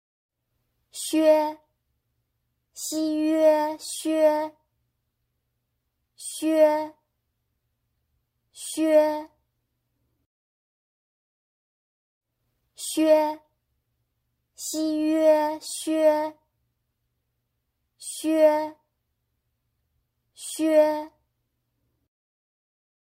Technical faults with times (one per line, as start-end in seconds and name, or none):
10.86-13.14 jitter buffer speed-up